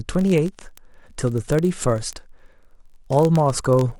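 Word clock ticks run from 0.11 to 3.98 s, sharp and uneven, about every 20 ms: an unlocked receiving clock keeps slipping against the sender's, dropping or repeating a sample.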